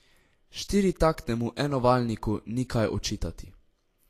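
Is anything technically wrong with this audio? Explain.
Yes. Throughout the speech, nothing sounds above 14.2 kHz and the treble is hissy and grainy, likely Vorbis compression quantising the residue coarsely, consistent with a low bitrate near 36 kbps.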